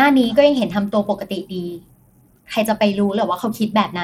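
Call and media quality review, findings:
Bluetooth SBC compression, throughout. Treble thin and flickering in and out, gritty grainy noise riding on the speech, aliasing shimmer. Likely an SBC link squeezed to a small bit pool, which fits something around 96 kbps. Top sub-bands starved of bits, the rest coarsely quantised, so the damage is plainly audible. Worth checking the headset negotiation.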